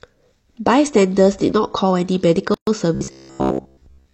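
A speech clip with two distinct faults. From 2.54 to 2.67 s there is a gap at a join of encoded pieces: a silence of about 129 ms opens abruptly in continuous speech, its edges smeared by the codec. The talk then resumes exactly where it stopped. This points to separately encoded segments joined without trimming, so each piece's encoder start delay and last-frame padding remain in the stream as dead air. From 2.95 s to the end, the speech turns into a rigid metallic buzz that still roughly tracks the syllables. This is robotic sound from repeated short buffers, with the buzz fixed at 66.7 Hz. That rate corresponds to a repeated segment of about 15 ms, which fits the playback software likely looping the last short buffer whenever new audio arrives late. Most of the real audio in that stretch is skipped and replaced by the repeats.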